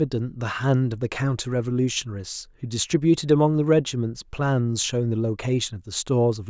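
No technical faults can be heard anywhere in the speech. There is no point in the audio that needs a timestamp or a correction.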